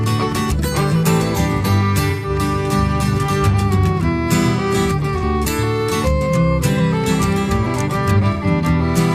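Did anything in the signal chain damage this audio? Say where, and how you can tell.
Yes, at the codec stage: AAC frame loss with concealment at 2.10–2.29, 5.17–5.24 and 8.33–8.44 s. Each smeared, noisy patch lasts about 128, 43 or 85 ms, consistent with lost frames being rebuilt from the last good spectrum. A spectrogram shows frozen, blurred bands there.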